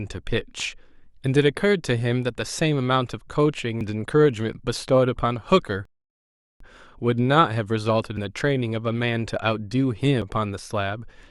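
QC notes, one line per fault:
3.81 s, dropped buffer (overrun): an abrupt jump forward, as about a tenth of a second of speech vanishes and the surrounding sound is butted together with no gap. Likely the capture side fell behind and the hardware overwrote unread samples.
5.85–6.60 s, rebuffering stall: the speech cuts to silence for 0.75 s, then picks up exactly where it stopped. The player ran dry of downloaded audio and waited for more, so nothing is missing but the clip runs 750 ms longer.
8.17 s, dropped buffer (overrun): another skip, again losing roughly a tenth of a second of speech. The two edges meet directly, likely because samples were overwritten before being collected.
10.22 s, dropped buffer (overrun): the largest jump, with about a fifth of a second gone. There's no silence, likely from the same overrun mechanism as the earlier skips.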